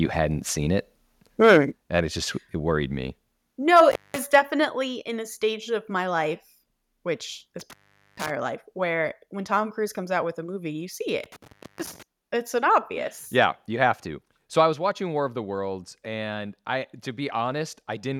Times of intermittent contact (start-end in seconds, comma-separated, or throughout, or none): 3.91-4.18, 7.60-8.31, 11.24-12.03